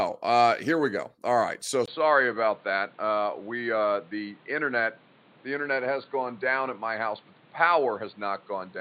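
From 1.86 s, just after "right so", the speech turns dull and boxy after a brief 20 ms gap, and it stays that way to the end. Nothing above about 4.6 kHz survives, a faint new background noise sits well under the speech, and the loudness barely changes. The likely cause is the input switched to a poorer device mid-recording, such as a headset's call profile replacing the original microphone.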